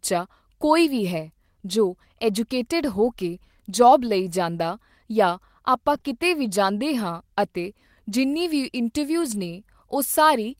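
Lost packets rebuilt from error correction at 0.85 to 0.87 s, 4.07 to 4.09 s and 5.93 to 5.95 s: each 20 ms stretch of this speech never arrived, so the decoder played the low-bitrate copy carried in the following packet. There is no gap, but each spot turns briefly rougher and noisier.

Short concealed packet loss at 5.97 to 6.01 s and again at 6.01 to 6.04 s: two back-to-back 20 ms holes had no backup copy. The receiver extended the preceding sound and then blended back into the real audio, leaving a brief smear or wobble.

Lost packets rebuilt from error correction at 9.22 to 9.40 s: five separate packets, 100 ms in all, were replaced by the reduced-quality copies, giving a longer coarse and grainy patch.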